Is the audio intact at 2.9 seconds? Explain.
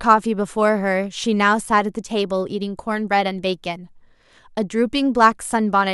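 Yes, the speech at 2.9 seconds plays through intact, with no dropout, click, distortion or other fault at that moment.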